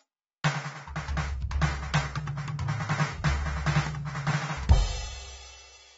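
AAC compression runs throughout the music, the likely cause of its plainly audible damage: nothing sounds above 7.7 kHz, leaving it dull, and quantisation against a hearing model starves the spectrum, smearing and warbling sustained tones, which fits AAC-LC at roughly 24 kbps.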